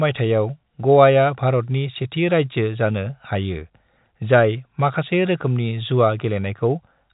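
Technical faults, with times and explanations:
No technical faults can be heard in this speech, which carries the narrow telephone band of G.711 coding, with nothing above 3.8 kHz.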